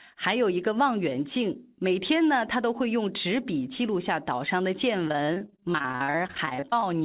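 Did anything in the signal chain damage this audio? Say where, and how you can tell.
Yes, network: repeated packet loss from 5.08 to 6.84 s. Twenty-six gaps, the longest 46 ms, get patched by stretching the last sound, hence the choppy, robotic patch.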